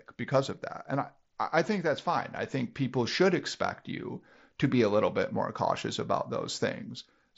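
No faults found in the speech, and the Bluetooth mSBC headset path is operating normally.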